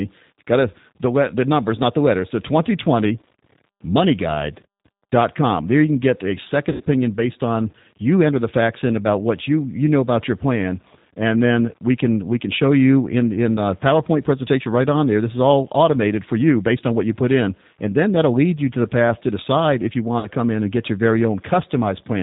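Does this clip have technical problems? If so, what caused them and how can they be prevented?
Yes. The whole clip carries G.729 codec damage: the speech is band-limited to 4 kHz, rough and slightly synthetic, which fits an 8 kbit/s G.729-type codec rebuilding each frame from a vocal tract filter and a few pulses. Prevent it by using a wideband codec such as G.722 or Opus.

VoIP packet loss concealed by the speech codec occurs at 6.72–6.82 s, covering about 80 ms of lost audio, and at 20.19–20.28 s, covering about 40 ms. The decoder extends the last pitch and filter with falling gain, and the speech stays weak briefly after packets resume. Prevent it with better network QoS, a larger jitter buffer or forward error correction.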